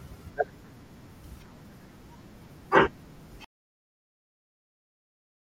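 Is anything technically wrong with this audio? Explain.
Yes. At 3.45 s the speech cuts off abruptly into silence, with no room tone, and stays silent to the end at 5.48 s. This is an audio dropout to silence, likely from the input being lost while the recorder kept writing silence, so those final 2 seconds are gone.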